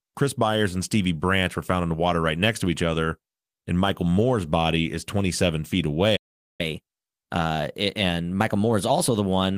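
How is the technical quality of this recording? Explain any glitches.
The recording has two linked glitches near the end: a dropout in the speech followed by a stretch that runs fast.

Playback stall, 6.16 to 6.61 s: the speech cuts out mid-flow for about 0.43 s of silence. That's likely the player running dry of data or its thread getting blocked, so nothing reaches the output until it recovers.

Catch-up at higher speed, 6.61 to 9.56 s: right after the gap, the player resamples to chew through its backlog, so everything runs 1.1 times faster and sits about a semitone and a half higher in pitch.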